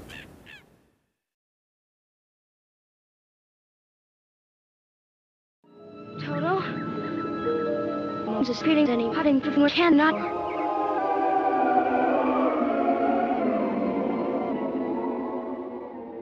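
From 10.24 to 11.42 s and again from 15.66 s to the end, a Bluetooth SBC bit pool drop dulls the treble and adds gritty noise without gaps, which fits a bit pool cut from 31 to 15 (about 105 kbps).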